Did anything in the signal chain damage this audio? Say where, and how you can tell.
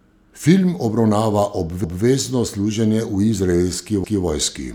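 Yes, overlapping chunks at the buffering stage. At 1.84 to 2.04 s and again at 4.04 to 4.24 s, about 200 ms of speech plays twice, a stutter every 2.2 s. Each 2-second chunk starts before the previous one ended, so the joins double up.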